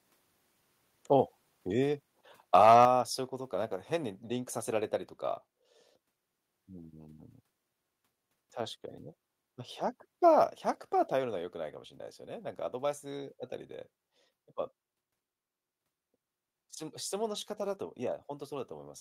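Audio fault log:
2.55–2.85 s microphone overload: the loudest peaks flatten into a harsh crackle. The likely cause is input gain driving the converter about 5 dB past full scale, cutting off the tops of a few percent of samples. The distortion comes and goes with loudness, unlike steady noise.
2.85 s and 11.13 s microphone volume stepped down: the voice and the background drop together in one abrupt step, by about 6 dB and then about 4 dB. This is likely software lowering the device input, the first time right after the clipped peak. It is an instant step, not a gradual fade.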